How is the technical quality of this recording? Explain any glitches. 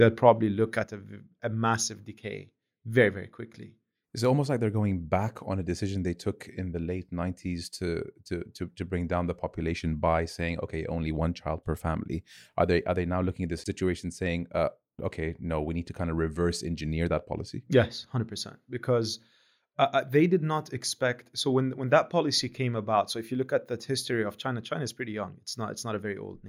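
The recording has one clear fault. From 0.84 s, right after "probably look", through to the end, the level falls abruptly by about 6 dB, which is likely one channel dropping out, leaving only half the stereo signal in the mono sum. The waveform shows a sudden, permanent step down in amplitude, and the spectrogram turns uniformly dimmer across all frequencies.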